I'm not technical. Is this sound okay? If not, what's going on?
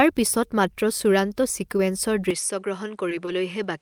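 No. From 2.31 s to the end there is an input switched to a poorer device: the speech suddenly turns duller and a little quieter, with nothing above 10.9 kHz, and faint new background hiss. The likely cause is the recording jumping to a lower-quality microphone with a narrower range.

At 3.09 to 3.13 s there is a short stall from a late packet. A piece of audio arrived behind schedule, so the receiver held the last sound for about 20 ms until it caught up. Nothing is lost, but that moment drags slightly.

At 3.25 to 3.29 s there is a short concealed packet loss. About 20 ms of audio never arrived, so the receiver patched the gap by extending the previous sound, then blended back. It comes across as a brief smear or wobble.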